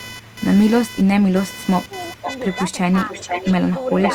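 A buzz pulsing around 500 times a second sits well below the speech throughout, computer activity noise from load changes likely disturbing the audio circuit's shared ground. From 0.22 to 0.39 s and 0.89 to 1.32 s, a faint copy of the voice trails 415 ms behind. From 1.88 s to the end, a much stronger copy follows 480 ms behind. This echo leak is likely the far side's echo canceller letting loudspeaker sound back into its microphone. The voice dips deeply from 1.82 to 2.24 s, then dips less from 2.90 to 3.29 s, speech suppressed in double talk, likely the canceller ducking both talkers as they overlap.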